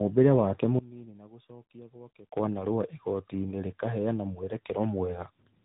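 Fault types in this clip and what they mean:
Tandem speech coding: two speech codecs in sequence, each recoding the other's degraded output, leaving rough, warbly speech; the spectrogram shows smeared formants and nothing above 3.8 kHz.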